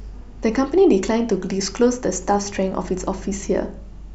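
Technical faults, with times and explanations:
No technical faults can be heard anywhere in the speech. Nothing in the audio stands out as a defect at any moment.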